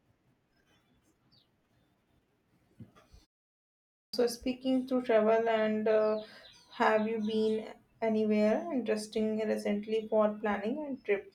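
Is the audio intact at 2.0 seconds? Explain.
Yes, the audio is intact at 2.0 seconds, with no fault at that moment.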